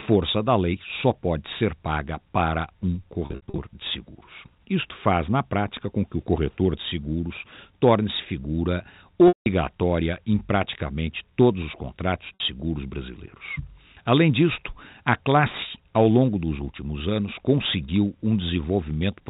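Packet loss with pitch repetition strikes three times. From 3.26 to 3.58 s, after "ser paga para um", 200 ms drops out in bursts up to 60 ms. Each gap is filled by repeating the last pitch period, giving a buzzy hold. At 9.28 to 9.46 s, 180 ms goes missing. The repetition fades to silence, then cross-fades back. At 12.34 to 12.40 s, after "praticamente todos os contratos", a 60 ms buzz hangs briefly, within the 4 kHz G.711 telephone band.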